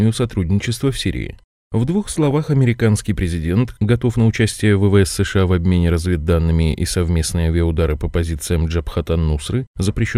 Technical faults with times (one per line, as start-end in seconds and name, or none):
2.08-2.31 DAB burbling